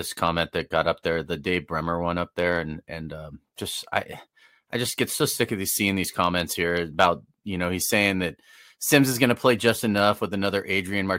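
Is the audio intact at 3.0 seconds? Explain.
Yes, at 3.0 seconds the speech plays through intact, with no audible fault at that moment.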